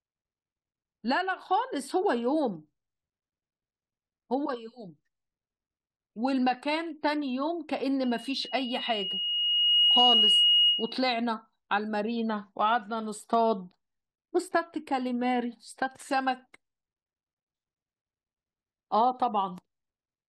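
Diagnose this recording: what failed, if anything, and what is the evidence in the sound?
A loudspeaker feedback squeal breaks out in the speech at 8.03 s, a steady 2.9 kHz tone swelling over roughly two seconds to about 10 dB above the speech, ending at 11.02 s. The fault is in the analogue acoustic path: the microphone re-captured its own loudspeaker, and loop gain exceeded unity there.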